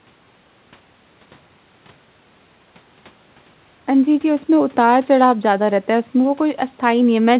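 Nothing goes wrong here: the speech arrives over a call connection with the narrow, telephone-style band you'd expect, with nothing above 4 kHz, which fits a G.711 mu-law link, and there's no fault to point to anywhere in it.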